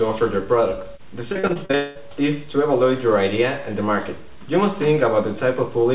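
From 1.32 to 1.75 s, repeated packet loss (robotic sound) chops the audio: seven short gaps, none over 38 ms, patched by repetition, leaving a choppy stutter rather than one hole. Straight after, from 1.75 to 1.99 s, the sound smears into a continuous fading buzz or hiss for about 200 ms without falling silent, likely a long network dropout, distinguished by one sustained patch instead of rapid breaks. All of this sits within G.711 audio that carries nothing above 4 kHz.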